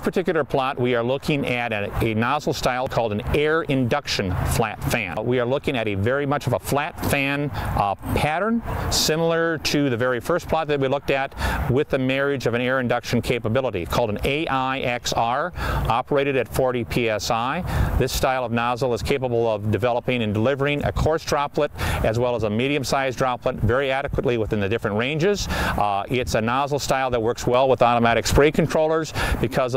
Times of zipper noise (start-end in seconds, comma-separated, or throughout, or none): none